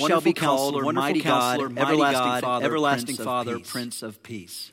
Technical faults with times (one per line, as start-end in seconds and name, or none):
0.00-4.72 doubled audio track